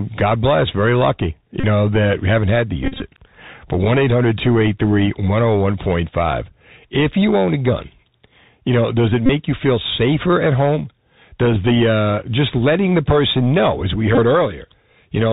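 This is a speech clip carried over a Bluetooth headset link, and the Bluetooth CVSD headset codec damage is plainly audible throughout. CVSD codes each sample as a single up-or-down step with an adapting step size. The sound points to a 64 kbps stream. Nothing above 4 kHz survives, so the speech sounds narrow and boxy. S sounds turn scratchy. A granular hiss sits under the speech. Loud, bright sounds outrun the step size and distort.

There are four Bluetooth headset packet repeated faults. Lost packets were replaced by re-decoding the previous packet's bits. Because this repeats every 3.75 ms, each run gives a buzz near 267 Hz. The first runs from 1.60 to 1.64 s, about 34 ms. The second follows "we haven't had to" at 2.82 to 3.02 s. About 120 ms is lost, scattered over roughly 190 ms, with the longest buzz around 40 ms. The third, from 9.26 to 9.30 s, falls between "you know does it" and "you feel safer at". 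The last follows "person know as we" at 14.15 to 14.19 s, with about 23 ms lost in short runs.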